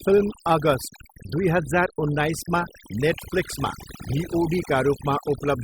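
A short speech clip with overdone noise removal running the whole way through: the denoiser was clearly pushed too hard, gating off bands it mistook for noise. So the background drops and breaks up into twinkly specks.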